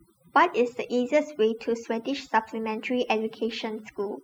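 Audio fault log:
Throughout: overdone noise removal. The noise reduction was pushed too hard, so individual frequency bands sitting near its noise estimate get pulled way down or shut off. The softer parts of the speech go with them, leaving near-silent gaps with twinkly specks.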